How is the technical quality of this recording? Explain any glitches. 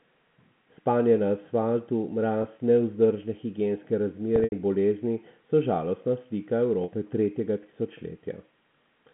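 Three brief dropouts stand out against the narrow telephone-band sound of the G.711 line: packet loss with pitch repetition at 2.42–2.44 s, 4.36–4.52 s and 6.84–6.88 s. The receiver fills each gap by looping the last pitch cycle. The first gap, about 20 ms, fits one lost packet and sounds like a faint buzzy hold. The second scatters 120 ms of loss over 160 ms and fades toward silence. On a spectrogram, harmonics freeze flat; the waveform shows identical repeating periods decaying.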